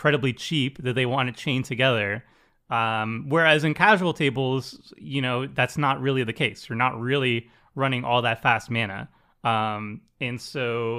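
Listening to the recorded speech, nothing technical stood out as a problem at any point.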